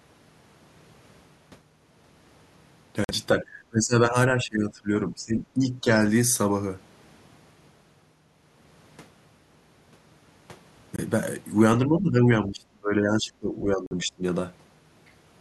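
At 3.04 to 3.11 s the speech cuts to silence for about 46 ms, then resumes further along, as though it kept running underneath. This is a Bluetooth dropout, likely caused by packets failing to reach the headphones in time. The gap length fits two lost packets of roughly 23 ms each. Holes of about 23 ms at 10.96 to 10.99 s and about 46 ms at 13.86 to 13.93 s follow the same pattern.

From 3.33 to 5.98 s the speech level sinks in uneven stretches, totalling around two seconds and dipping by about 15 dB at worst. This is speech suppressed in double talk. The likely cause is an echo canceller that could not tell this talker apart from loudspeaker echo while the far side was also speaking, so it attenuated both. A second, deeper episode runs from 11.83 to 14.23 s, reaching about 25 dB down and overlapping the 13.86 s dropout.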